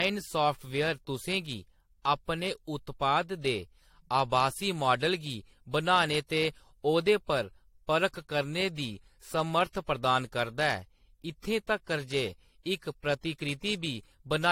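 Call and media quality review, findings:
Generation loss, throughout the speech: swirly, hollow texture, smeared consonant attacks, no content above 16.5 kHz. Likely repeated AAC-LC decode/re-encode, around four passes, consistent with a 64 kbit/s chain; each pass requantises on a shifted frame grid, stacking noise and spectral holes. Distinguishing point: more smeared than one 64 kbit/s encode would sound.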